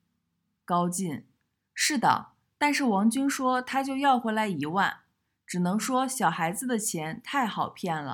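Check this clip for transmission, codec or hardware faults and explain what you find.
Nothing turned up here; the speech comes through without any transmission, codec or hardware trouble that I could pick out.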